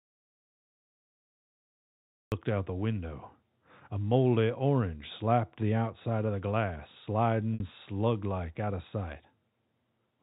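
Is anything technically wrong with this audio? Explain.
Yes, two faults. An audio dropout to silence is already under way when the clip begins and lasts until about 2.32 s. The signal is silent with no room tone, which most likely means the input was lost, through a disconnected device, a failed link or a mute, while the recorder kept writing empty samples. That flat, noiseless floor is what separates it from a quiet passage or a deliberate pause, where some background hiss would remain.

At 7.54 s to 7.60 s there is packet loss with pitch repetition, a gap of 60 ms, which fits three lost 20 ms packets. The receiver concealed it by looping the last pitch period of the speech and fading it, so the sound briefly holds a slightly buzzy, sustained tone before the speech resumes. Unlike the dropout, the gap is mostly filled with repeated voiced sound rather than silence. The band-limited character of the G.711 telephone coding is audible around it.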